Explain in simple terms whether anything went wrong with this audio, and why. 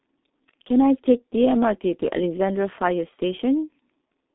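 G.723.1 codec damage runs through the whole clip. This old internet-phone codec squeezes speech into a tiny data stream, keeping nothing above about 3.8 kHz and updating its voice model slowly, so the speech sounds muffled and hoarse, with smeared consonants.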